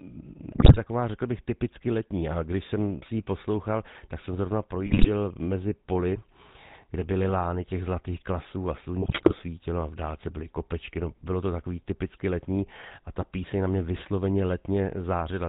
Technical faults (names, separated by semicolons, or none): GSM full-rate codec; GSM bit errors